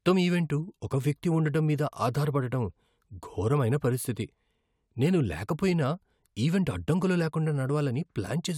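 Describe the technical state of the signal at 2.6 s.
At 2.6 s the speech signal is intact, with no audible fault at that moment.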